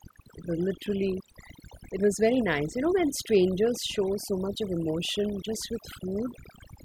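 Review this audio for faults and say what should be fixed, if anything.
Background drops with twinkling specks throughout: overdone noise removal, gating individual frequency bands near the noise estimate. Prevent it by easing the noise reduction strength.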